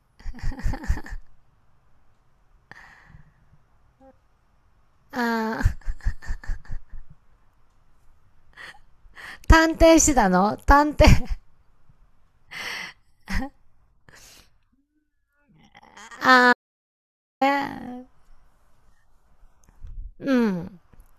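From 16.53 to 17.41 s an audio dropout to silence cuts the speech for 0.88 s, likely a lost input; the waveform goes flat and the spectrogram shows a blank gap.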